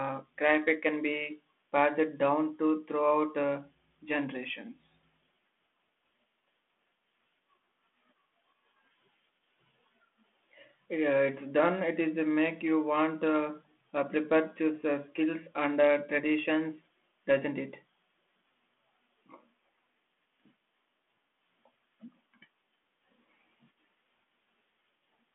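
No technical faults are audible.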